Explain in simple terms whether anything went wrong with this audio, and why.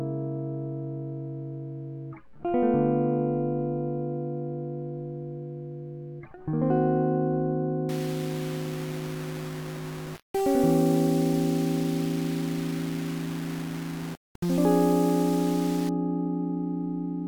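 From 7.89 to 15.89 s the music turns gritty, and the quiet passages crackle or sputter. That's low bit depth without dither. The sound fits audio rounded off to just 5 bits, likely with no dither added, so the grain follows the music itself.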